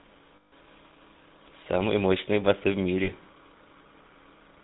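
From the start, the speech carries the buzzy, gravelly roughness of the GSM full-rate codec, with nothing above 4 kHz and a coarse pulse-driven excitation consistent with 13 kbps coding. Unlike plain band-limiting, the grit sits inside the voice itself, plainly audible throughout.

Lost GSM frames occur from 0.36 to 0.53 s and again from 3.04 to 3.10 s. The decoder repeats the last good frame, so the sound freezes into a metallic ring rather than dropping out or clicking as a simple gap would. The first hold runs about 160 ms, fitting eight 20 ms frames, and the second about 40 ms.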